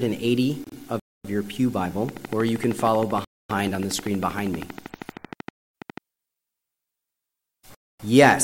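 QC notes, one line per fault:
0.64–0.75 s, repeated frames: a short run of compressed frames was played two extra times, which points to a block of two frames, about 52 ms in all. The decoder replays that stretch, so it stutters and the audio runs about 104 ms longer.
1.00–1.25 s, 3.25–3.50 s, 5.50–5.75 s, 7.75–8.00 s, gap between chunks: the audio arrives in 2-second chunks with 250 ms of silence inserted at each join. Nothing is lost, but the sound is interrupted at every seam, leaving holes at a steady interval.
2.09–5.98 s, train of clicks: likely interference from nearby equipment or a faulty connection injects a repeating pulse. Around 40 near-identical clicks arrive evenly at 12.7 per second, peaking about 10 dB above the signal, and tick through the sound and its pauses alike.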